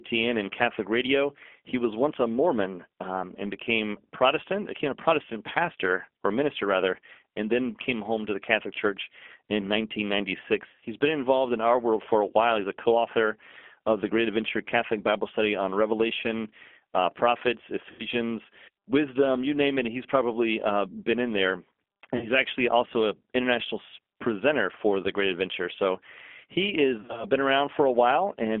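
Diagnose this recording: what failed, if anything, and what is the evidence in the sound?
Codec stage: the speech has the rough, slightly synthetic edge of a G.729 codec, band-limited to about 250 Hz–3.4 kHz, which points to an 8 kbit/s link.

Network stage: VoIP packet loss concealed by the speech codec at 10.70, 17.91, 22.17 and 27.00 s, with smeared fades as the decoder extrapolates, then weak or distorted recovery.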